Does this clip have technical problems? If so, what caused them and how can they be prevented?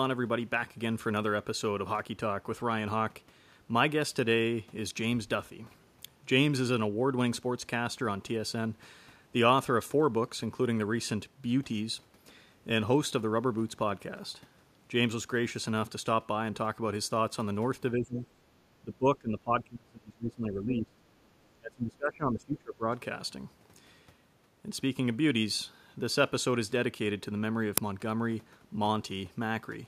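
Yes. Speech suppressed in double talk appears at 17.97–18.17 s and again from 18.8 to 21.06 s and 21.53 to 22.87 s. The talker dips by roughly 20 to 25 dB, likely because the echo canceller mistook overlapping far-end audio for echo and attenuated both. On a spectrogram the harmonics and upper frequencies thin or vanish in patches, and the waveform envelope sags. A double-talk detector that holds off suppression when near-end energy is strong would prevent this.

The background is gated by the echo canceller from 18.45 to 18.52 s. The room noise drops by about 8 dB for around 70 ms while the canceller clamps the microphone, then recovers. This shows as a brief notch in the noise floor across all bands and a small dip in the waveform. Adding comfort noise, or releasing the suppressor more gently, would keep the background steady.

An uninitialised buffer plays at 27.78 s. It is a burst of about 1.45 ms of leftover memory read as audio, which fits a 64-sample block. 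The waveform shows a sudden spike, and the spectrogram a thin vertical broadband stripe. Zero-filling buffers before they are queued for playback prevents this.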